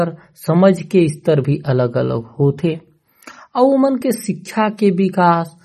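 Heavy MP3 compression, likely at a low bitrate around 32 kbps, runs the whole way through. Short of bits, the encoder discards everything above 13.8 kHz and drops weak frequency lines frame by frame, so the speech sounds dull, watery and swirling, with chirpy sibilants.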